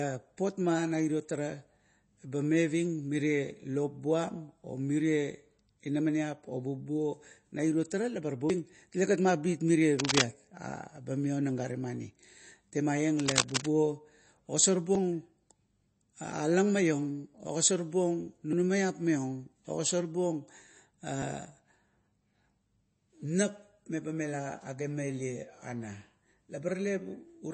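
Speech recording whose whole length is band-limited, with nothing above 8.4 kHz, and carries watery, swirling artefacts and smeared consonant attacks. That is likely MP3 compression at a low bitrate, which fits about 32 kbps, where the encoder discards treble and weak spectral lines. Abrupt forward jumps in the sound occur at 8.50 s, losing roughly a tenth of a second, and at 14.95, 18.53 and 21.22 s, each losing about 50 ms. These are likely a dropped buffer (overrun): samples were overwritten before being read, and the surrounding audio is spliced together with no gap. Bursts of dense, uneven scratching sit over the speech from 9.99 to 10.25 s and from 13.17 to 13.70 s, roughly as loud as the speech itself. This is likely cable scratch noise from a loose connector or worn control changing contact resistance as it moves.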